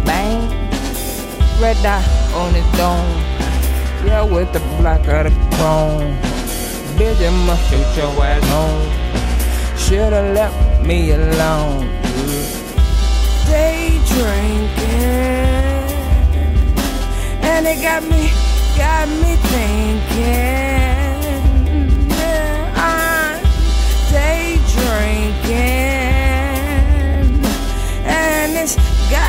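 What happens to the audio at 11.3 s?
At 11.3 s you're inside a wrong sample rate stretch, running from 4.03 to 12.74 s. Material that fits a 48 kHz recording is being played at 44.1 kHz without conversion. Everything slows to about 0.92 speed and drops roughly 1.5 semitones, so it sounds slightly lower and slower.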